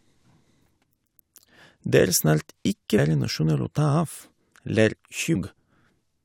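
At 2.97 s and again at 5.34 s, the speech is broken by a brief glitch lasting under 20 ms, the mark of damaged data in a compressed stream. Corrupted bytes leave the decoder unable to read a frame, so it loses sync and hunts for the next valid header, briefly emitting garbage.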